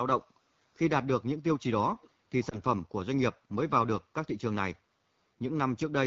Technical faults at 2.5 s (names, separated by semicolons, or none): AMR wideband (HD Voice) codec; lost AMR speech frames